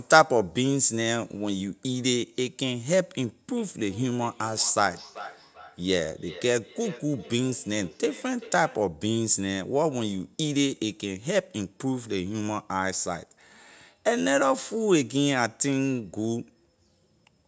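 From 3.57 to 8.9 s there's feedback echo between two devices: a second device in the room replays the call and the microphone catches it again. The speech comes back roughly every 0.4 s, thin and ringing, peaking about 18 dB below the talker.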